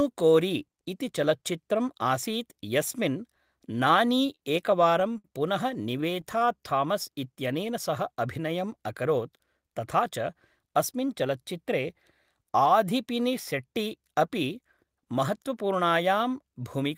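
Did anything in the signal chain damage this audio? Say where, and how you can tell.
Yes. Repeated stalls (stutter) occur from 3.97 to 5.26 s and again from 5.74 to 6.24 s. The speech keeps catching and hanging on its last sound: eleven brief holds in the first stretch, totalling 188 ms, the longest 63 ms, and six shorter ones of up to 14 ms in the second. This is a network delivery problem. Packets reached the receiver late, its jitter buffer ran dry repeatedly, and it extended the previous sound to cover each wait. Nothing is lost, but the delivery drags.

Jitter buffer slow-down follows at 6.38 to 6.92 s. The speech plays at about 87% speed with its pitch unchanged, so sounds stretch out. The receiver, short of reserve, repeated individual pitch periods to rebuild its buffer, inserting 81 ms of extra audio across that half-second.

Jitter buffer speed-up runs from 8.94 to 9.73 s. The speech hurries along at about 111% of normal speed, again with the same pitch. 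Here the buffer had overfilled, most likely from late packets arriving in a burst, so the receiver trimmed out single pitch cycles in quick succession. It removed roughly a tenth of a second to bring the delay back down.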